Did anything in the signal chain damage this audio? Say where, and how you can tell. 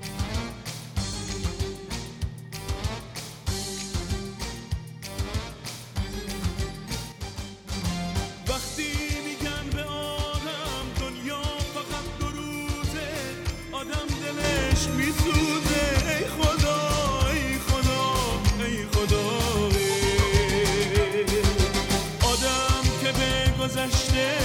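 Yes. There are two sudden gain jumps, likely from a digital gain setting applied in the processing stage with no ramp. At 7.12 s the level drops by about 6 dB in a single step and snaps back at 7.72 s. At 14.44 s it steps up by about 7 dB and stays there to the end. In both cases the background noise moves by the same amount as the sound, so the whole signal was scaled at once rather than the source changing.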